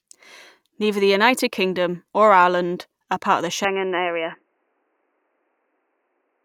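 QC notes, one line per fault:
3.65 to 6.45 s, input switched to a poorer device: the recording path most likely moved mid-clip to a different, band-limited input, such as another microphone or a headset call profile, and stays there to the end. From 3.65 s nothing above 3 kHz gets through, so the speech turns dull and boxy with no gap at the switch and little change in loudness. A faint new background noise enters, roughly 50 dB below the speech.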